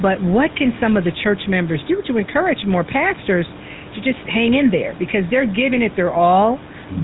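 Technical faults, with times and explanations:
Throughout, GSM full-rate codec: the speech carries a plainly audible buzzy, gravelly roughness because the coder rebuilds the voice from a vocal-tract model driven by sparse, regularly spaced pulses, and nothing above 4 kHz survives, which fits 13 kbps full-rate coding.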